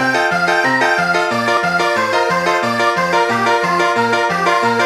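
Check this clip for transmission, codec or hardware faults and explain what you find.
One fault runs through the whole clip, a wrong sample rate. The samples are played back about 1.5 times faster than captured, with no conversion, which fits 32 kHz material played at 48 kHz. Everything sounds hurried and about seven semitones higher.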